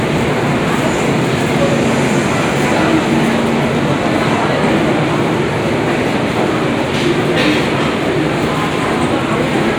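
From 2.02 s to 4.09 s a train of clicks sits over the everyday sound: sharp, similarly shaped pulses arriving at about 11.6 per second but with uneven spacing, some thirty in all. They peak around 5 dB above the surrounding audio, so they read as a distinct ticking or popping rather than texture. The likely cause is interference from nearby equipment or a faulty connection or power supply, injecting the pulses during that stretch.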